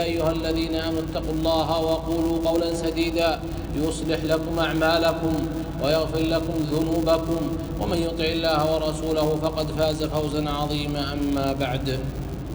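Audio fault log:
Throughout: filter restarted on every block. There's a steady buzz sitting at 200 Hz under everything, and it rides the level of the audio, louder in the busy parts and fading when things go quiet. That's a filter throwing away its memory at each block boundary and starting cold, so every block opens with a little click. Two hundred of those a second fuse into a pitched buzz rather than separate ticks.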